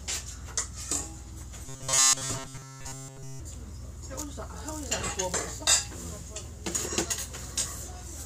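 From 1.65 to 3.4 s the sound becomes a rigid, metallic buzz at a fixed 133 Hz: robotic sound, likely from repeated short buffers of about 7.5 ms filling in for late audio. Unlike a dropout, nothing goes silent; the repetition imposes its own steady pitch throughout.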